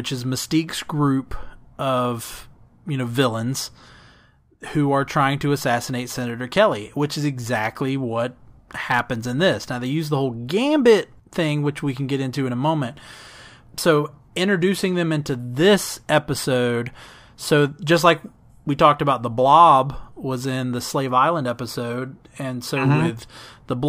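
Nothing goes wrong anywhere in this speech recording, so there's no fault to point to at any moment.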